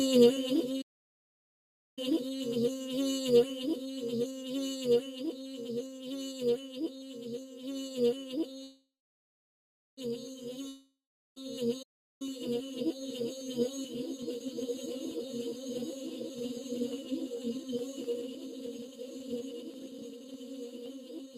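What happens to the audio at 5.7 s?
At 5.7 s, as throughout the clip, a noise suppressor applied to music or sounds is at work. Tuned for speech, it treats sustained tones, ambience and decay as noise and pulls them down by around 5 dB, while sharp onsets pass. Held sound and tails sink and recover, giving a fluttering, thinning pumping. Unlike a compressor, the level doesn't follow loudness; it follows how steady the sound is, and nothing cuts out completely as with dropouts.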